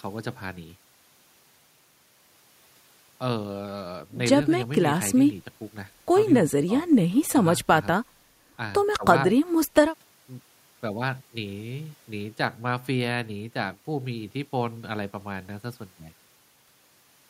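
A speech recording with nothing technically wrong with it.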